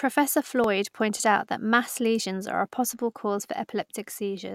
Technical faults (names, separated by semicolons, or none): dropped buffer (overrun)